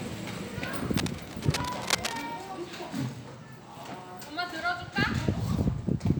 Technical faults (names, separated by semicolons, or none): cable scratch noise